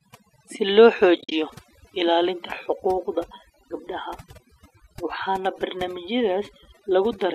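Speech runs all the way through with overdone noise removal: the denoiser was pushed too hard, so the background collapses into near silence dotted with twinkly specks, and the voice's quieter parts got pulled down along with the noise. Right after "si loo", between about 1.16 and 1.32 s, there's AAC frame loss with muting. The decoder zeroed out the missing frames, so you get soft-edged dropouts, about 110 ms of gaps scattered across 160 ms, the longest around 50 ms. That spacing fits roughly eleven 10 ms frames, which points to the low-delay AAC of a call link as the likely source.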